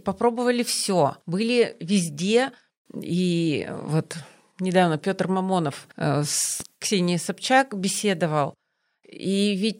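Speech, with one loud pop from 6.60 to 6.63 s. It is a single sharp click, peaking a few decibels above the voice. The speech continues underneath. A brief voltage spike, likely from a switch, plug contact or static discharge, caused it.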